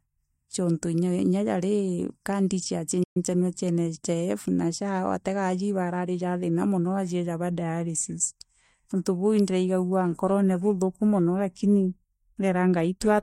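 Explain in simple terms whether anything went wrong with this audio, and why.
At 3.03 s the speech cuts out abruptly mid-flow, unlike a natural pause, and stays silent for 120 ms: a playback stall, likely from the player briefly running out of data.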